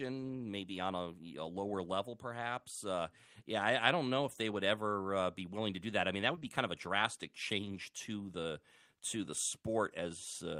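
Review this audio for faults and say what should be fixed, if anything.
Two short concealed packet losses sit back to back, at 6.35–6.39 s and 6.39–6.43 s, right after "that I mean that". Each leaves about 20 ms of sound that never arrived in time, and the receiver bridges it by extending the preceding sound before blending back into real audio. The result is a brief smear or wobble. A larger jitter buffer or steadier network path would prevent it.

Immediately after, at 6.43–6.49 s and just before "kind of a drastic", comes a lost packet rebuilt from error correction. The 40 ms span, which fits two lost packets, is played from the low-bitrate copies carried in the following packets (Opus in-band FEC), so nothing drops out, but those frames sound rougher and noisier. A spectrogram shows grainier, less defined harmonics with more noise between them, while the waveform stays continuous. Reducing packet loss on the link prevents it.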